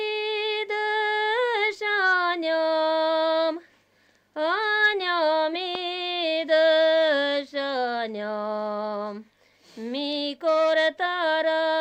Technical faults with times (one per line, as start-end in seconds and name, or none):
5.75-5.77 loud pop